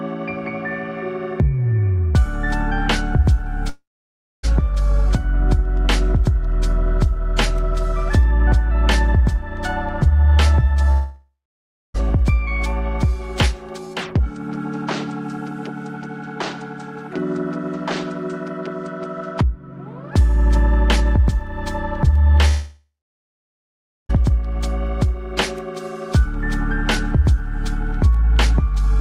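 At 3.69 s, 10.91 s and 22.48 s, the sound smears into a fading buzz, then silence. It resumes at 4.45 s, 11.96 s and 24.11 s with material missing. This is likely a long network dropout.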